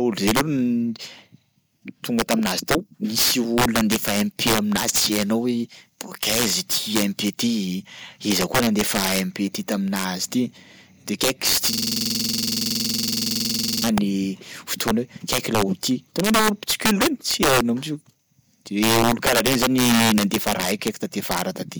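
It's a speech recording with two problems. Integer overflow runs all the way through: the level is pushed about 5 dB past full scale, and instead of clipping, the loudest peaks (around one percent of samples) wrap to the opposite sign, so those peaks get a harsh crack. Then from 11.73 to 13.84 s there's a system hang loop. One 46.44 ms slice repeats about 45 times at 21.5 Hz, a rough stuttering buzz that fits a stalled driver cycling a 2048-sample buffer.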